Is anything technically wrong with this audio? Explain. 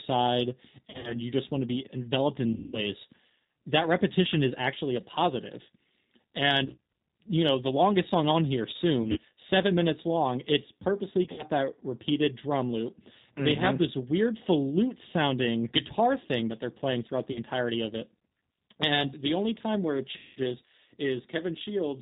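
Yes. Throughout, the speech sounds slightly rough and synthetic, with nothing above 4 kHz. This is plainly audible G.729 codec damage. At 8 kbit/s, the G.729A codec rebuilds each frame from a vocal tract model, a pitch predictor and a few pulses, so the fine detail is lost.

VoIP packet loss concealed by the speech codec occurs seven times: 0.89–1.19 s (just before "you just want"), 2.53–2.87 s (after "be enveloped"), 6.65–6.78 s, 9.02–9.19 s, 11.24–11.43 s, 17.32–17.41 s (between "that they're playing throughout" and "of it") and 20.17–20.39 s. Each time, the speech smears into a fading buzzy or noisy tone, and it stays weak briefly afterwards. The decoder is extrapolating from its last pitch and filter over missing packets. The longest gaps, near 2.5 s and 20.2 s, are unbroken runs of about 200 ms. The one near 17.3 s is a single 40 ms gap, and the others are short losses scattered within each window.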